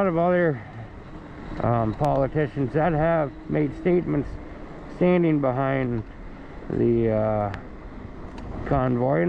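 At 2.05 to 2.18 s there is a loud pop. It is a double pop, two sharp hits in quick succession. At 7.54 to 7.56 s a single loud pop follows. Each peaks about 10 dB above the surrounding sound, which carries on underneath. The likely cause is a sudden voltage step or spike, from a plug, a switch, static or a driver glitch, entering the signal path. The circuits after it shape that pulse into a brief thump.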